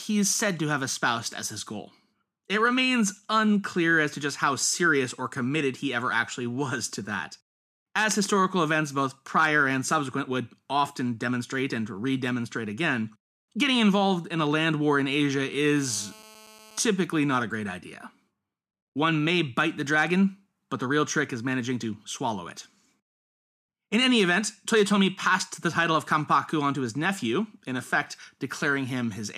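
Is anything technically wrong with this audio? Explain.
Yes. 15.76–16.81 s, GSM phone buzz: a 2G phone's 217 Hz bursts, rectified in the audio circuit, add a steady, raspy, harmonic-rich buzz about 24 dB below speech.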